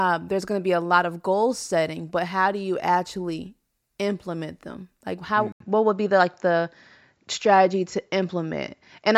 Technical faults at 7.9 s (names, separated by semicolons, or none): input switched to a poorer device